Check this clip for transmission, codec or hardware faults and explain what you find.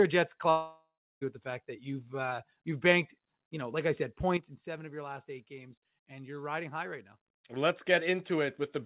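Two faults are audible in the speech. The whole clip also carries a hard band limit at 4 kHz, which fits a narrowband call codec such as G.711 mu-law.

From 0.50 to 1.23 s there is what sounds like a long network dropout. About 0.72 s of audio is missing. The receiver stretches the last sound into a fading buzz. Roughly the final 0.31 s decays to near silence. The speech then resumes at "with the fact that," with the lost part simply gone. The likely cause is packets that never arrived.

At 4.37 s, right after "know like I said," there is a sudden gain jump. The level drops by about 10 dB in a single step. The speech and the background noise fall together, which points to a digital gain change with no ramp. The lower level holds until 7.18 s. The likely cause is a gain setting or bit shift applied abruptly.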